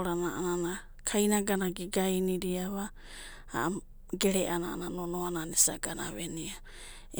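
No faults are audible anywhere in this speech recording.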